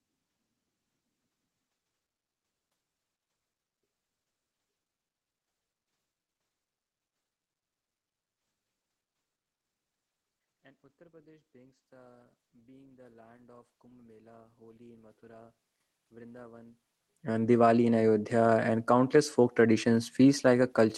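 From 10.6 to 15.57 s the automatic gain control judged the input too quiet and pushed its gain up by about 11 dB, so voice and room noise swell together over several seconds. It happens again from 16.1 to 19.3 s, climbing about 6 dB more. The background noise lifting in step with the speech shows this is automatic gain rising, not the talker moving closer.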